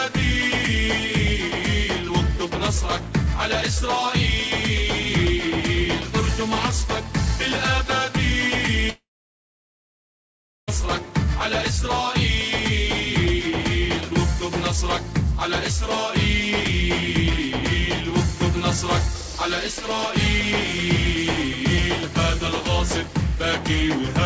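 From 8.90 s to 10.69 s the audio breaks off in what is likely a long network dropout. The last sound is stretched into a brief fading buzz, then about 1.6 s of near silence follows, and the audio resumes with roughly 1.8 s simply gone. The fading tail and the skipped material set it apart from a short packet-loss glitch or a deliberate mute. Through the call path, nothing sounds above 8 kHz, which fits G.722 at 64 kbps.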